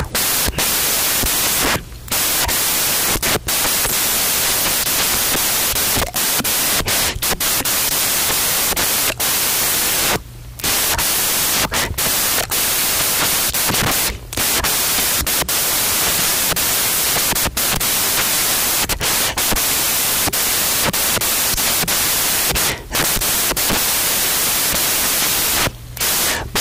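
The whole clip is loud, harsh broadband noise from samples built from the wrong bytes: the reader misassembles each sample, so jittery low bits dominate.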